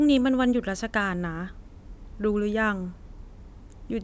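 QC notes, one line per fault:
Nothing to flag on this speech recording, as there's no fault to log anywhere in it.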